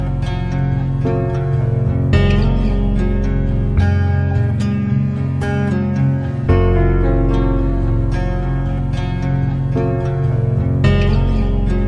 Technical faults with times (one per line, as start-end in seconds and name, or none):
0.00-11.88 wrong sample rate